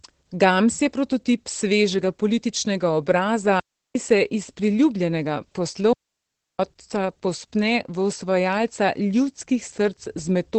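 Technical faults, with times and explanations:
Throughout: Opus voice compression. SILK coding at 12 kbps in wideband leaves nothing above 8.4 kHz, so speech sounds muffled, hoarse and plainly processed.
3.60–3.95 s: digital wireless dropout. After "prototip svežega političnega obraza" the receiver mutes for 0.35 s, a clean silent hole without noise bursts.
5.93–6.59 s: digital wireless dropout. Following "se iz priljubljenega" the link loses data and mutes for 0.66 s, leaving near silence with no crackle.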